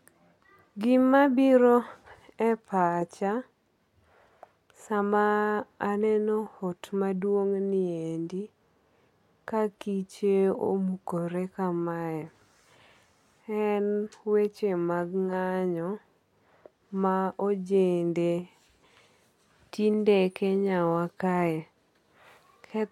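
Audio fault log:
No faults heard.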